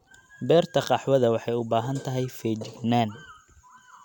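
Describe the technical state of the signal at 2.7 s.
At 2.7 s the audio is intact, with no dropout, click, distortion or other technical fault at that moment.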